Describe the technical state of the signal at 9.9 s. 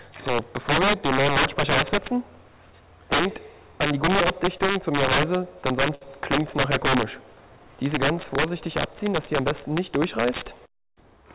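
At 9.9 s the integer overflow present throughout is active: driven about 11 dB too hot, a few percent of peaks wrap to the opposite sign, producing harsh cracks on loud sound within the 4 kHz call band.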